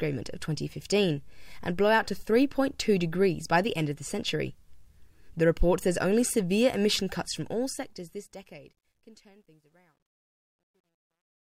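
From 7.32 s, truncation distortion on a fade: an undithered stage, consistent with 11 bits, steps the fading waveform, which turns gritty, worst from 8.96 s.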